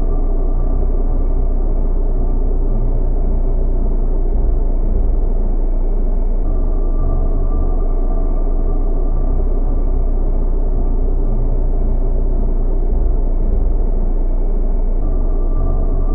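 No technical faults can be heard anywhere in the audio, which holds steady and continuous throughout.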